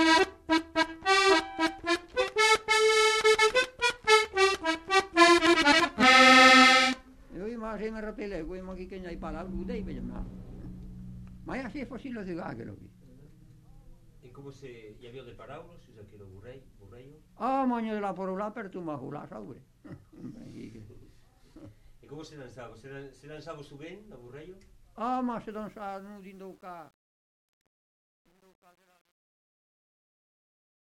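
From 25.51 s to the end at 30.86 s, the fade-out shows truncation distortion: the gain stage keeps only about 10 bits without dither, so from 26.87 s the tail turns gritty. The waveform shows blocky square steps, and the spectrogram shows broadband grainy streaks.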